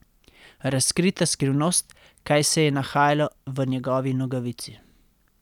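A listen through this speech recording turns up nothing technically wrong, so there are no problem spots, times or causes to point to.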